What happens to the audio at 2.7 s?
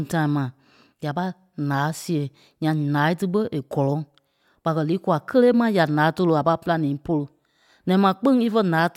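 Nothing goes wrong at 2.7 s; the speech carries on intact through that moment, with no dropout, click or distortion.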